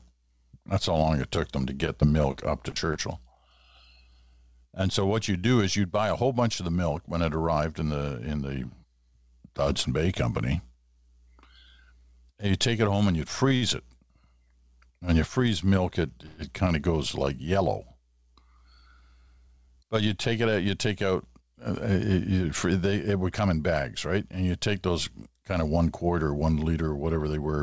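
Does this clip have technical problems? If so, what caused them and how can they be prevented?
Yes, there are four separate problems, all typical of audio that has come through a call. The call path itself, with a codec that fits G.722 and nothing above 8 kHz, isn't one of them.

Between 1.36 and 2.97 s there are scattered short gaps, about seven tiny holes where packets went missing or showed up late. The receiver covered each one by extending the sound just before it, so you get little ticks and smears rather than dropouts. The longest gap is around 30 ms, and about a tenth of a second is filled in across the stretch. Overall 80 ms of real audio is lost and 30 ms of extra time is added. Better loss resilience on the link, such as forward error correction, or a slightly deeper jitter buffer would hide these.

At 13.56 to 13.64 s there's a short stall from a late packet. One packet wasn't there on time, the jitter buffer ran dry, and the receiver held the last sound for 56 ms until it arrived. 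It then picked up exactly where it left off. Nothing is lost, but that moment drags a little with a slight buzz or dip, and the delay goes up by 56 ms. Smoothing out network jitter, or giving the buffer a bit more headroom, would prevent it.

From 16.26 to 16.40 s there's a call audio freeze. The sound hangs and turns into a fading buzz or hiss for 116 ms without ever dropping to silence, and then carries on from the same point. The likely cause is packets held up in transit long enough to empty the jitter buffer. No audio is missing, but a 116 ms pause has been inserted and the delay grows by that much. A more stable network path, like wired instead of congested Wi-Fi, or QoS on the traffic, is the fix here.

Between 19.27 and 20.91 s there's a jitter buffer speed-up. The buffer was carrying more audio than it wanted. To catch up, it snipped out many tiny pitch-period-sized pieces, roughly a tenth of a second in total. 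The sound plays at about 106% speed with unchanged pitch, so this stretch comes across slightly rushed. Preventing the delay spikes in the first place, so the buffer never overfills, avoids the catch-up.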